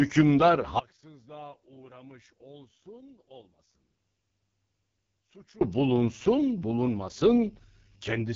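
AMR wideband (HD Voice) codec damage runs from 0 s to the end. The speech sounds rough and raspy, with nothing above about 7.3 kHz, which fits the codec's lowest 6.6 kbit/s mode. The speech is modelled as pulses through a vocal tract filter, and the top band is filled with shaped noise.

An audio dropout to a faint residue starts at 0.79 s and lasts until 5.61 s, about 4.8 s. The speech cuts off abruptly, leaving only a faint trace roughly 25 dB below normal before snapping back. The likely cause is a lost signal ahead of a path that stayed live.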